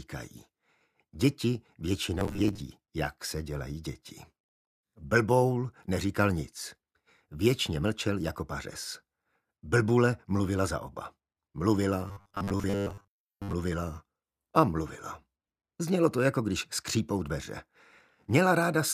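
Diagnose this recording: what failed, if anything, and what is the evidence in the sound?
Robotic sound from repeated short buffers at 2.19–2.60 s and 12.08–13.53 s: a rigid 100 Hz buzz, likely a driver or buffer stage repeating 10 ms blocks, unlike dropouts' silent gaps.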